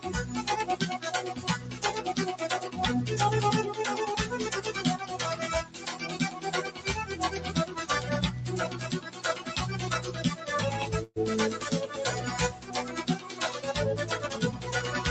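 A speech-tuned noise suppressor was left running on non-speech audio. It treats sustained and decaying material as noise, so the level swings by around 10 dB throughout. Attacks pass while held parts and tails sink, giving a pumping, thinned quality.

The suppressor cut specific sounds harder than the rest: 1.36–1.83 s (down about 8 dB), 5.64–5.87 s, 6.71–6.86 s and 8.97–9.45 s (each about 9 dB). Sustained or fading passages dip or have their decay chopped short.

At 11.03–11.18 s there is a call audio freeze, likely from packets delayed in transit draining the jitter buffer. The receiver stretched the last sound into a fading buzz or hiss for about 125 ms, including roughly 30 ms of near-silence. Playback then resumed where it stopped, so the rest of the clip runs about 125 ms late with nothing lost.

Two more suppressor cuts follow: 12.54–12.75 s (down about 7 dB) and 13.19–13.41 s (about 6 dB), again pulling down held or decaying material.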